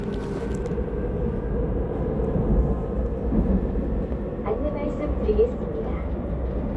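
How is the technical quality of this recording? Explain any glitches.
No glitches are audible anywhere in the recording, and the technical quality holds steady throughout.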